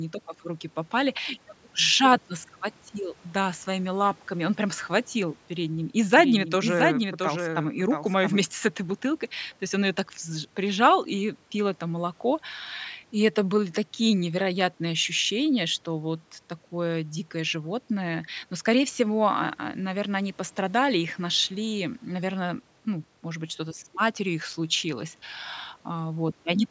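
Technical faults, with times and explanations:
6.17–8.37 s: doubled audio track. The speech is heard twice, with a dry, full-band copy trailing roughly 0.7 s behind at around 5 dB lower and starting and stopping abruptly. This is likely a second capture through a slower path, or an edit holding two out-of-step copies.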